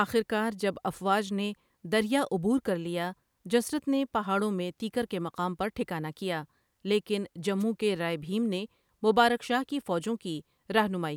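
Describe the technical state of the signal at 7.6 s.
At 7.59 to 7.64 s the speech carries a wireless microphone noise hit, about 40 ms long, just before "کے رائے بہیم نے". The FM radio link fades briefly through multipath cancellation, receiver noise rises over the speech, and it sounds as a short burst of static.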